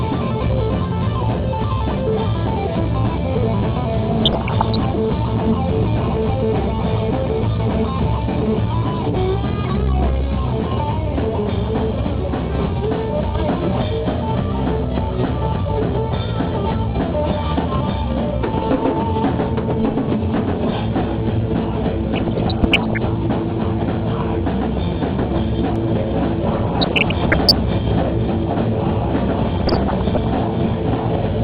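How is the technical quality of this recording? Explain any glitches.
The recording has two kinds of glitch: repeated reception damage and, near the end, a second copy of the audio running behind the first.

DAB burbling occurs at 4.19–4.84 s, 22.09–22.98 s, 26.60–27.58 s and 29.56–30.34 s. Bit errors from weak reception slip through error correction into the MP2 data, so wrong samples produce short blips of noise in single sub-bands and wrong scale factors make sub-bands jump in level for up to a frame.

A doubled audio track starts abruptly at 25.76 s and runs to the end. A full-band copy trails about half a second behind, roughly 5 dB quieter, with no decay or room colour, likely from a second, slower capture path being mixed in.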